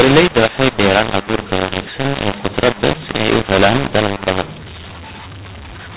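A mu-law and A-law mix-up runs through the whole clip: the speech was coded with the mu-law companding curve of G.711 but decoded as A-law. Because the two logarithmic scales map codes to levels differently, sample amplitudes come back scrambled, some too loud and some too soft, while the quietest samples are pushed well above silence. The speech sounds harsh and gritty, and pauses fill with hiss, all within the telephone band that stops at 4 kHz.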